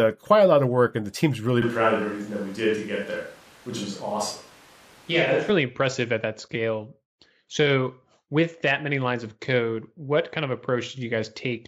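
At 1.62 s the speech abruptly turns roomy and hollow, with a thinner low end and a background noise floor about 25 dB below the speech, while the overall level barely changes. At 5.50 s the close, full sound returns just as suddenly. This is likely a switch to a distant microphone: the close mic's feed dropped out and a pickup further from the talker, capturing more reflections and less bass, covered that span.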